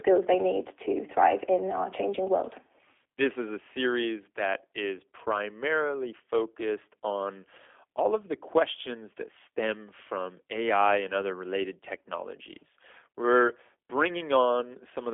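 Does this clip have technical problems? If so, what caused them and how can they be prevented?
Yes. G.729 codec damage runs throughout. Nothing above 3.6 kHz survives, and the speech sounds rough and synthetic, which fits an 8 kbit/s G.729 stream. To prevent it, use a wideband codec such as G.722 or Opus.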